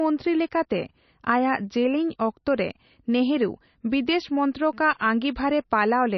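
MP3 compression throughout: nothing above 5.9 kHz survives, and the speech turns heavily watery and swirly, likely from an encoder starved of bits, fitting about 28 kbps.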